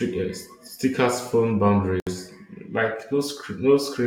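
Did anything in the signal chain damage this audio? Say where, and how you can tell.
Yes. At 2.00 s the speech drops into a gap at a join of encoded pieces, a hole of about 68 ms that ends at 2.07 s, after which the sound resumes exactly where it broke off. This is a codec-stage fault: the audio was encoded in separate pieces and joined without trimming each encoder's start-up delay and final-frame padding. On a waveform it shows as a flat dead stretch with smeared, tapered edges. On a spectrogram it is a clean vertical blank band, its borders smeared by the codec.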